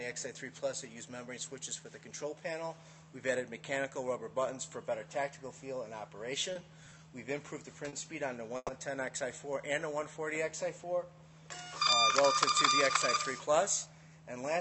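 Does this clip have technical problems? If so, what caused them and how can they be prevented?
Yes. Two short stalls from late packets occur, at 6.53 to 6.57 s and 7.89 to 7.95 s. Each time a packet arrived late and the jitter buffer ran dry. The receiver held the last sound for 20 ms, then 40 ms, before continuing. Nothing is lost, but the sound lingers with a slight buzz or dip. A slightly deeper jitter buffer would absorb delays this small.

A call audio freeze follows from 8.57 to 8.71 s. The receiver stretched the last sound for about 120 ms, fading out, with about 30 ms of near silence. The audio then resumes where it stopped. The likely cause is a burst of held-up packets that emptied the buffer. Adaptive buffering and a more stable network route would prevent it.

A jitter buffer speed-up runs from 12.89 to 13.87 s. The buffer had overfilled, so the receiver trimmed tiny pitch-period slices, about 70 ms in all. 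The sound plays at 106% speed at the same pitch and feels hurried. Smoother packet delivery avoids the backlog that triggers this catch-up.

The call codec path, with its top end limited to around 8 kHz, is working normally.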